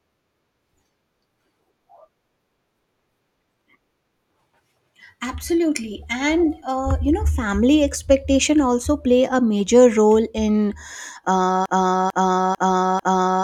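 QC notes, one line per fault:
11.66–13.43 s, broken-record loop: the speech stops moving forward and a single 0.45 s fragment repeats back to back four times, identically each pass, running to the end of the clip. The sample-exact repetition with no variation at the joins points to a stall where the player, encoder or stream most likely kept resending the last buffer it held. Whatever audio belonged in this final stretch is missing and replaced by the loop.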